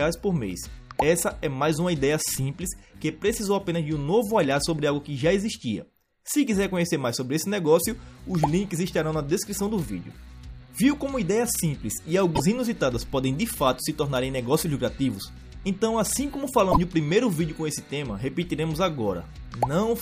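At 12.32 s and again at 16.68 s the audio breaks up briefly, for 80 ms and then 95 ms, the mark of damaged data in a compressed stream: corrupted bytes make the decoder misread frames, lose sync and hunt for the next valid header.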